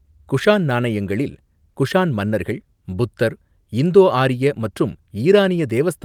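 No technical faults can be heard anywhere in the speech recording.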